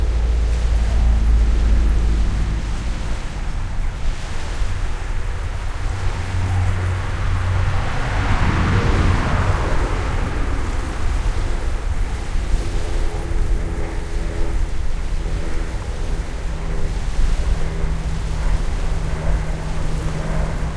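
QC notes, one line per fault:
No fault found in the clip.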